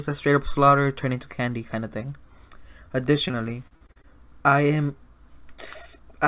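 Packets went missing over and over between 3.28 and 4.05 s, a stretch of repeated packet loss that leaves the sound choppy. Seven separate holes open in under a second, the longest about 41 ms, and each is bridged by stretching out the sound that came just before it, so roughly a fifth of that span is filled-in rather than real. The repeated patches give a stuttering texture with fragments dropped. Throughout, the narrowband call codec leaves nothing above 4 kHz, which fits G.711 at 64 kbps.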